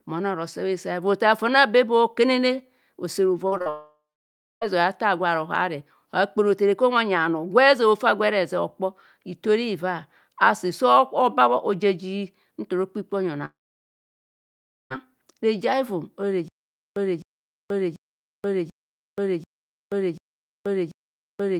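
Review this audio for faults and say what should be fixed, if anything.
Short concealed packet loss: at 3.47 to 3.54 s, 3.58 to 3.62 s and 3.62 to 3.68 s there are brief smears and wobbles where about 40, 20 and 40 ms of audio never arrived. The decoder extended the preceding sound to cover each gap before rejoining. A larger jitter buffer and forward error correction would prevent these.

Long network dropout: from 3.70 to 4.63 s the sound trails into a fading buzz, then about 0.6 s of near-silence. From 13.45 to 14.92 s there is roughly 1.4 s of silence. In both cases audio resumes further on with the middle missing, likely from a dropped network connection. Stabilising the link or adding redundant transmission would prevent it.

Stutter with silent gaps: from 16.48 s to the end, a 0.26 s burst of sound repeats every 0.74 s, separated by about 0.48 s of digital silence. The player likely stalled and kept replaying its last fragment before running empty, so the intended audio is lost. 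More playback buffering and proper underrun recovery would prevent it.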